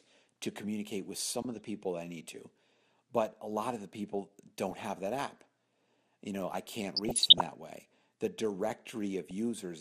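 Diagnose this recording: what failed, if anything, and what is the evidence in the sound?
The codec stage has failed throughout. The speech sounds dull and granular, with a gurgling edge on every phrase. Upper bands drop in and out. This is plainly audible MP2 compression, likely at a low rate around 80 kbps. Layer II divides the signal into 32 sub-bands and shares a small bit budget among them. Starved high bands are muted. The remaining bands are quantised coarsely.

DAB burbling sits on top of this, pointing to a weak reception path. There are four bursts: 1.42 to 1.59 s, 4.71 to 4.83 s, 6.95 to 7.41 s, and 9.26 to 9.31 s. Each is brief. The longest, near 7 s, points to about twenty corrupted frames. Bit errors, a few in a thousand, slipped past error correction. Corrupted samples then put short blips of noise into single sub-bands.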